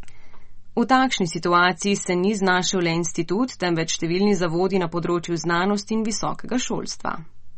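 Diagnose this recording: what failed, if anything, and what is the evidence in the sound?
The damage sits at the codec stage: the speech is dull with nothing above 8.3 kHz for the whole clip, and the sibilants have that watery, swirly shimmer. That's likely MP3 compression, which fits a starved bitrate near 34 kbps cutting the treble and dropping weak spectral lines frame to frame.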